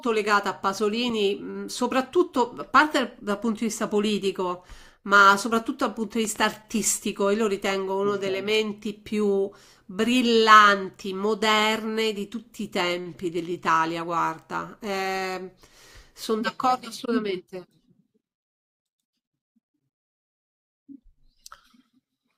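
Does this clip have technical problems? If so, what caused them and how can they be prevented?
Yes. A loud pop, actually two quick pops, sounds from 6.25 to 6.38 s, peaking roughly 5 dB above the speech, which continues underneath. This is likely a voltage spike from a plug, switch or static discharge. Keep connections secure and avoid switching or handling cables while recording.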